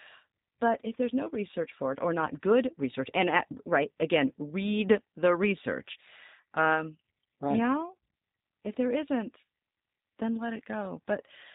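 G.729 codec damage runs through the whole clip, from start to finish, and is plainly audible. The speech has been squeezed into a coarse parametric model: a vocal tract filter, a pitch predictor and a handful of pulses per 10 ms frame, a budget that fits roughly 8 kbit/s. Everything above 4 kHz is gone, so sibilants sound dull, and the voice takes on a slightly buzzy, synthetic roughness as each frame is rebuilt rather than carried faithfully.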